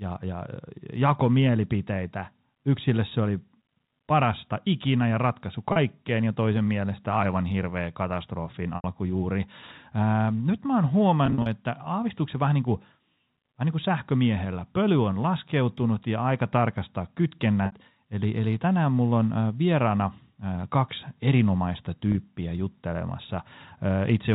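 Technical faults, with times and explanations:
5.72 to 17.72 s, packet loss with pitch repetition: audio went missing at 5.72 s (40 ms), 8.76 s (80 ms), 11.26 s (120 ms scattered over 200 ms, runs of up to 40 ms) and 17.66 s (60 ms), consistent with 20 ms packets. The receiver looped the last pitch cycle, so each gap sounds like a brief buzzy hold fading out before the sound resumes, over band-limited G.711 telephone audio.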